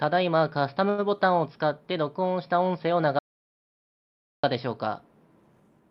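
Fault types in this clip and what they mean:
Short stall from a late packet: At 0.89 s a packet arrived late and the buffer ran dry, so the last sound is held for about 88 ms before continuing where it left off. Unlike a dropout, nothing is lost; the rest simply plays 88 ms later.
Audio dropout to silence: From 3.19 to 4.43 s the sound cuts to silence for about 1.24 s, with no room tone underneath, likely from the input being lost while recording continued. Unlike a stall, nothing is held or stretched, and whatever occurred in that span is gone.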